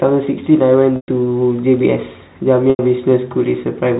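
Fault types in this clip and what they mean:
Packet loss with pitch repetition: at 0.96 s and 2.7 s the speech briefly hangs on a buzzy, repeated tone that fades into silence before cross-fading back. Gaps of 120 ms and 90 ms were lost, and the last pitch period was repeated to fill them.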